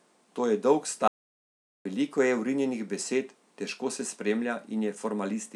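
At 1.08 s the speech cuts out abruptly and the signal falls to silence, with no room tone or noise floor underneath, until it resumes mid-flow at 1.85 s. This is an audio dropout to silence lasting about 0.78 s. The likely cause is a momentary loss of the input, such as a disconnected device, a failed link or an accidental mute, while the recorder kept writing silence. Whatever was spoken in that span is unrecoverable.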